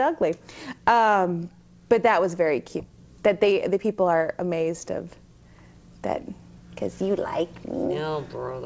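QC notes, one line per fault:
2.8 s: skip ahead. Playback jumps forward with no gap, dropping roughly 400 ms of audio while later audio was already waiting; the two sides of the cut are joined almost directly, so material simply goes missing and the delay shrinks by a similar amount.
2.89–3.94 s: jitter buffer speed-up. The receiver trims short pitch-period pieces repeatedly, removing around 100 ms in total, so this stretch runs at 108% speed with pitch unchanged and sounds hurried; the G.722 path at 64 kbps, with nothing above 8 kHz, carries it.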